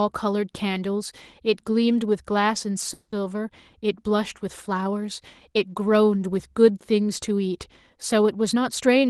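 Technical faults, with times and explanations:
2.93 to 3.14 s, call audio freeze: packets were likely held up and the jitter buffer ran dry, so a 190 ms fading fill was inserted and speech resumed without loss.
8.53 to 9.06 s, jitter buffer speed-up: an overfull buffer was trimmed by cutting pitch-period pieces, roughly 100 ms in total, so the speech runs about 16% faster at unchanged pitch.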